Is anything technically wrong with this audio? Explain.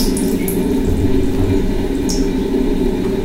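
No, nothing is technically wrong with this audio.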